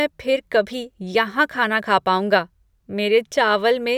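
No faults to report: the speech recording runs without any audible break, glitch or defect anywhere along its length.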